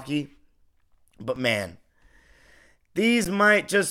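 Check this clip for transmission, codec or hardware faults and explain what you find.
The speech has two brief underruns with held sample, at 1.36 s and 3.25 s. Each time the output buffer ran dry and the converter held its last value, so the waveform goes flat for 2.9 ms and 11.6 ms. That fits 128- and 512-sample buffers. About 3 ms and 10 ms of audio went missing.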